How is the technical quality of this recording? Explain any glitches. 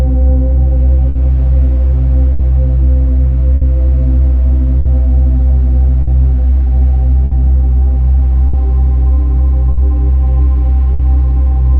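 The recording has two timing faults: a steady clock mismatch across the whole clip and a series of brief dropouts.

Clock drift between sender and receiver runs throughout. The sender's clock runs slow by roughly 5 percent, so the receiver's buffer keeps draining. It repeats or stretches short pieces to keep up, and this is heard as small, irregular timing hiccups.

Scattered short gaps appear from 1.09 s to 11.01 s. About ten lost or late packets were each patched by extending the preceding sound, around half a second in total, with the longest near 70 ms. They come through as brief ticks and smears.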